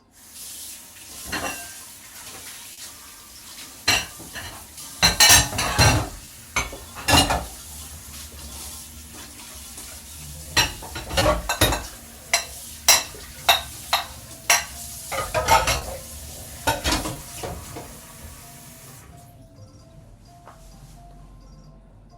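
Short concealed packet loss occurred seven times: 40 ms at 2.73 and 15.77 s, and 20 ms at 6.25, 7.61, 10.43, 11.19 and 17.13 s. Audio arrived too late, so the receiver extended the preceding sound, leaving a brief smear or wobble.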